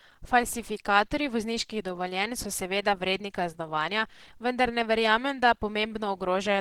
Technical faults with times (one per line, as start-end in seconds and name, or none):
0.00-6.60 Opus compression